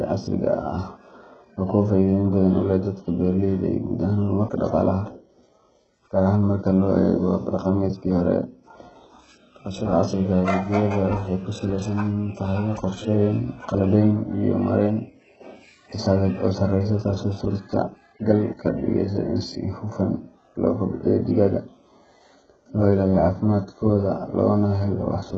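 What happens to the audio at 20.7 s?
At 20.7 s the speech sounds gritty and lispy, with a metallic treble and nothing above 8 kHz, as it does throughout. The likely cause is heavy HE-AAC compression, whose damage fits a very low bitrate around 8 kbps: the upper band is rebuilt by copying lower bands upward, so its harmonics no longer line up.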